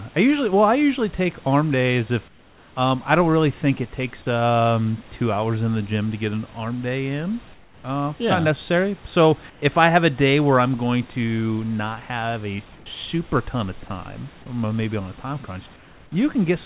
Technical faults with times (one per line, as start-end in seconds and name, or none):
2.28-2.76 comfort noise in place of the background
7.54-7.84 comfort noise in place of the background
9.50-9.62 comfort noise in place of the background
12.76-12.86 comfort noise in place of the background
15.76-16.12 comfort noise in place of the background